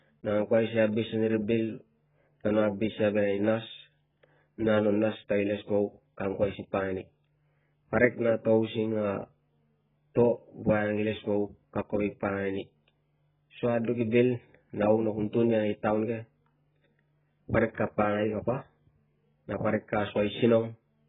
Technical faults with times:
0.00-21.09 AAC compression

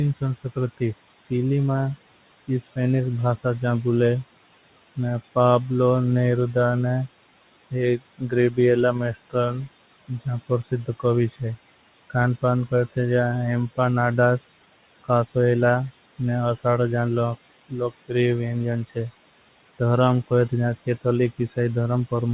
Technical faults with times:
0.00-22.34 noise suppressor artifacts
0.15-1.31 speech cut by the noise suppressor
7.71-12.12 speech cut by the noise suppressor
13.76-15.36 speech cut by the noise suppressor
17.69-22.34 speech cut by the noise suppressor

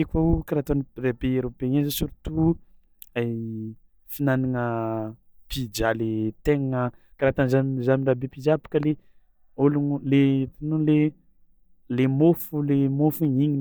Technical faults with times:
8.83-8.85 loud pop

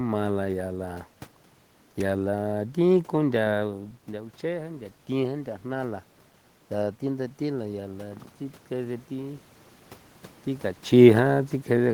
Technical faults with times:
7.04-9.52 automatic gain rising

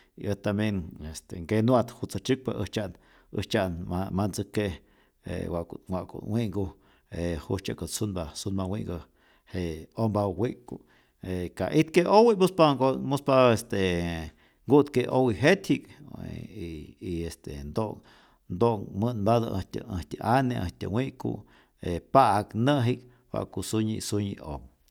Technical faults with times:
none

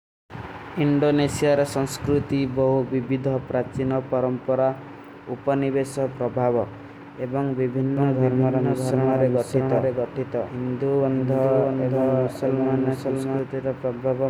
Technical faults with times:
7.97-13.39 doubled audio track

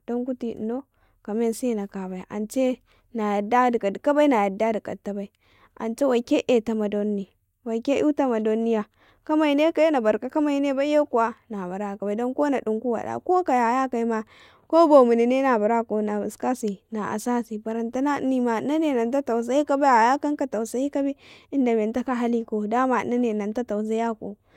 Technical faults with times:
none

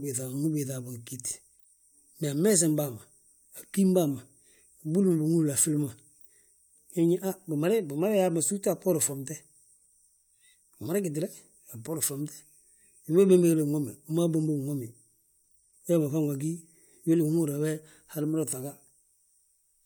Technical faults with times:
none

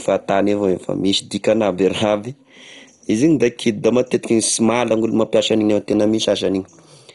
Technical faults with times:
0.00-7.15 MP2 compression

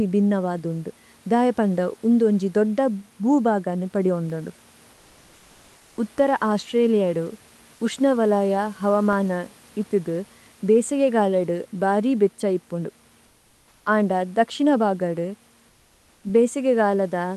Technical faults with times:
3.74-4.49 CD scratch ticks
8.94-9.50 CD scratch ticks
13.27-13.83 comfort noise in place of the background
15.71-16.23 comfort noise in place of the background

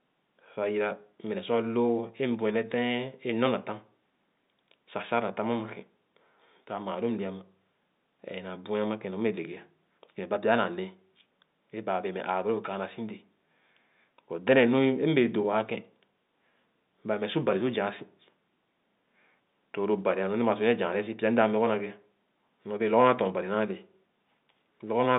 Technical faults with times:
none

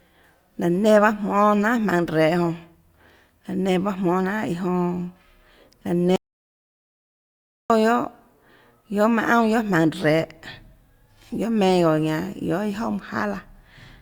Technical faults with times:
6.16-7.70 audio dropout to silence

